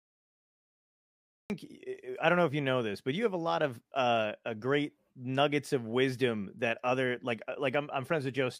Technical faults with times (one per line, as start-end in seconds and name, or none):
0.00-1.50 cut-off start